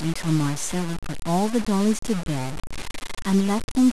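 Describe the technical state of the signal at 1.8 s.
At 1.8 s, as throughout the clip, the speech sounds grainy, with grit that follows the signal. This is likely low bit depth without dither: truncation consistent with about 4 bits.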